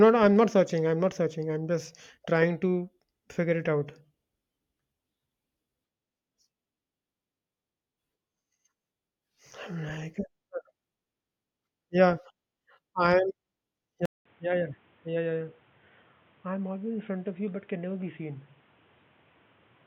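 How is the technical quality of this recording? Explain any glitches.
One glitch stands out: at 14.05 s an input switched to a poorer device, likely a different microphone or a headset's call profile, and it stays that way to the end. After a 200 ms silence, the speech returns about 10 dB quieter and boxy, with nothing above 3.8 kHz and new background noise roughly 30 dB below it. A codec bandwidth drop alone would not bring that gap, the level fall and the fresh noise floor all at once.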